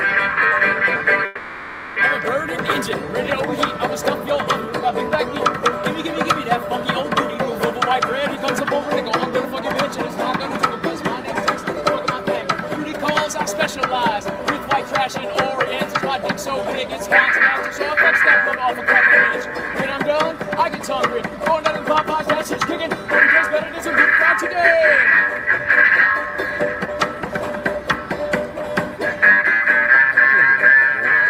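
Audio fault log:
1.25–1.98 s, call audio freeze: the last sound is stretched into a fading buzz or hiss for 0.71 s, likely from delayed packets emptying the jitter buffer; playback resumes where it stopped, with nothing lost.
8.36–12.43 s and 18.57–27.41 s, jitter buffer speed-up: sound runs 5% fast at unchanged pitch as tiny pitch-period slices are cut, removing roughly 0.2 s then 0.4 s of built-up delay.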